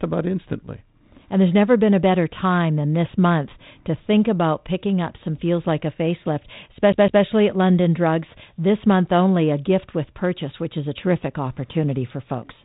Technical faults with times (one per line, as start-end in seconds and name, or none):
6.92-7.24 CD stuck on one turn